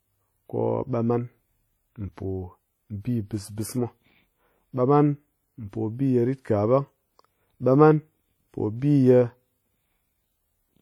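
Throughout the speech there's a ringing, washy smear with hiss pumping along with the voice, likely WMA compression at a low bitrate, around 48 kbps, spreading quantisation noise across long blocks.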